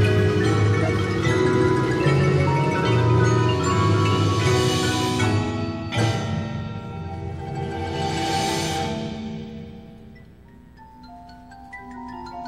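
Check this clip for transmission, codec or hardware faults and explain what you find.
There's one fault here, a corrupt frame decoded, from 0.78 to 0.89 s. Roughly two compressed frames had flipped bits and the decoder played them anyway, so misread gains or codes put energy at the wrong frequencies. It's heard as a brief glitch lasting about that long: a chirp, squeak, blip or burst of noise.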